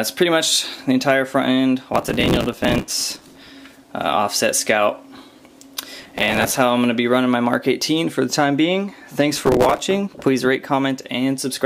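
The processor falls behind its deadlines for small audio buffers, apparently only a few milliseconds each, three times: from 1.94 to 3.50 s, from 5.99 to 6.56 s, and from 9.36 to 9.78 s. Each missed buffer is filled with a repeat of old audio, so the sound is stitched with hard-edged fragments. This processor overload crackle is heard as a gritty, tearing burst riding on top of the sound, longest in the first stretch, stopping each time the load passes.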